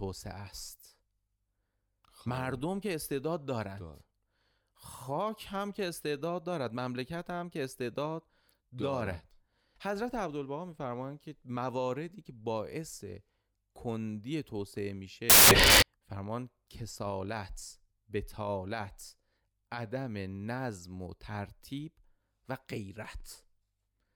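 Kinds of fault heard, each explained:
Samples built from the wrong bytes: from 15.30 to 15.82 s the speech turns into a burst of loud, harsh noise for about half a second, because each sample's bytes got stitched together wrongly, so the jittery low bits end up driving the waveform.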